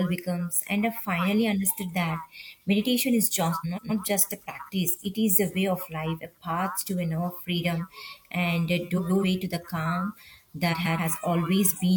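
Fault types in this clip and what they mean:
Frames out of order: adjacent frame runs decoded swapped, so three 0.28 s stretches play with halves exchanged: garbled flutter.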